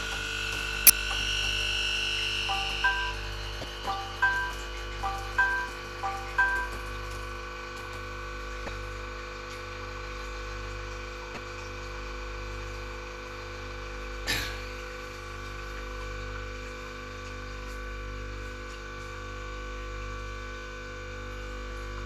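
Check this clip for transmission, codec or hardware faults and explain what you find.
There's one fault here, and it's damaged data in a compressed stream, showing up five times: 0.87–0.90 s, 3.61–3.64 s, 8.65–8.68 s, 11.34–11.37 s and 14.24–14.27 s. Each hit lasts about 30 ms. Some of the coded bytes were corrupted, so the decoder misreads those frames, loses sync and hunts for the next valid frame header. What you hear is a short chirp, squawk, click or brief hole breaking into the audio at each of those spots.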